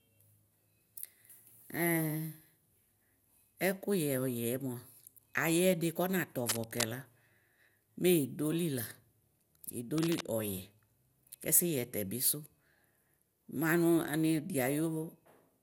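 Throughout the speech, generation loss, likely from around seven MP2 passes at 128 kbit/s, leaves smeared, swirly, hollow sound. The spectrogram shows nothing above 18 kHz.

From 6.49 to 6.84 s and 9.98 to 10.23 s, cable scratch noise, likely a worn contact, adds rustling bursts. These appear as dense, ragged broadband smears and jagged waveform spikes.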